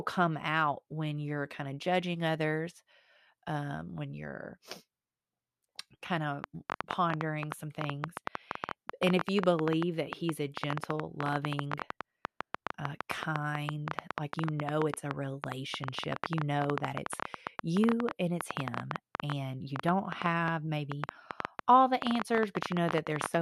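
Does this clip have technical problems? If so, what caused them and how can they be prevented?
Yes. From 6.44 s to 23.36 s, a train of clicks ticks unevenly over the speech and pauses, about ten per second and some two hundred in all, peaking well above the speech. Likely cause: interference from nearby equipment or a faulty connection or power supply. Prevent it by moving cables and devices away from interference sources and using a stable interface.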